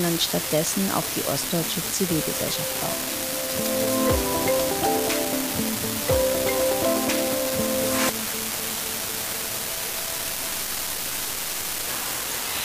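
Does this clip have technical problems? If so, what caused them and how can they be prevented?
Yes: an unreliable data bit runs throughout, one marginal line flipping randomly, each error a spike of about -15 dBFS, heard as constant crackle even in pauses. Prevent it by fixing connections, grounding and timing margins on the digital bus.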